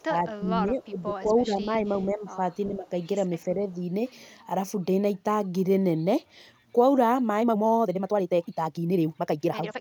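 Right from the start the speech gets pushed down in bursts: 0.00 to 1.10 s, 1.46 to 2.40 s, 2.67 to 2.87 s and 3.48 to 3.67 s, dipping by about 15 dB at worst, then about 10, 10 and 5 dB. That's speech suppressed in double talk, likely an echo canceller ducking its own talker along with the echo while the far end talked over it. Then from 7.39 s to the end at 9.80 s there's a time-stretched section sped up to 1.88 times. The pitch holds but the pace jumps and turns rushed, likely from software dropping short slices to squeeze it to length.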